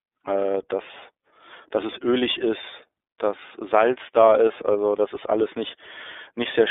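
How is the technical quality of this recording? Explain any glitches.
The technical quality is limited by one fault that runs through the whole recording. An iLBC codec encodes each 30 ms frame independently, in a mode that fits its 13.33 kbps rate, and keeps only about 300 Hz to 3.6 kHz. The speech therefore sounds narrow and muffled, with plainly audible rough, synthetic coloration throughout.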